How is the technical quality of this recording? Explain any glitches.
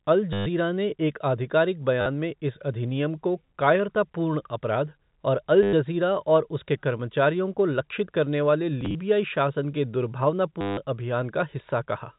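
The recording has repeated dropouts, heard over a telephone-band channel that stops near 4 kHz. There is packet loss with the last packet repeated at 0.33–0.46 s (just before "ने एक आधिकारिक"), 2.01–2.06 s, 5.63–5.73 s, 8.81–8.95 s (scattered, runs up to 30 ms) and 10.61–10.77 s. Lost packets were filled by replaying the previous one. Longer runs buzz at about 100 Hz, which fits 10 ms packets. The result is a brief robotic stutter.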